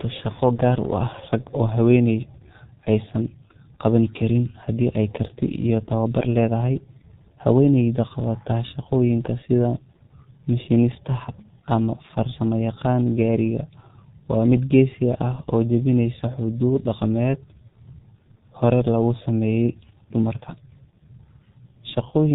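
From start to finish, the speech carries heavy G.723.1 codec damage. The sound is muffled and hoarse, with nothing above 4 kHz and smeared consonants, which fits roughly 6.3 kbit/s.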